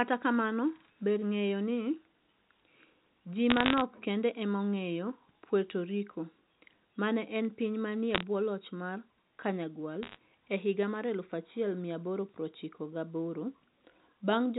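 A speech recording over a telephone line carries three short bursts of sharp ticks and crackle: from 3.50 to 3.81 s just before "kende ema ong'eyo", from 8.15 to 8.23 s between "ne en piny manie" and "bwo loch mar", and from 10.03 to 10.17 s leading into "e higa mar". These are bit errors on a digital phone line. On the 64 kbps G.711 A-law link, which limits the audio to below 4 kHz, a few tenths of a percent of bits were flipped. Each flip corrupts one sample, and a hit on a high-order bit, or on the sign of a loud sample, throws that sample far off, producing a click over the unchanged speech.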